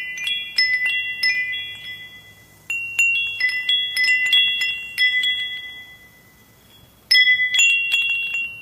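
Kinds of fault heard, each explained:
Compressed frames skipped: whole blocks of the encoded stream never reach the output, either missing from the file or rejected by the decoder as corrupt, so the audio leaps forward instead of pausing. Five jumps occur, at 1.49, 3.39, 4.65, 7.53 and 8.41 s, each dropping roughly a fifth to half a second of material, which points to runs of several 46.4 ms frames.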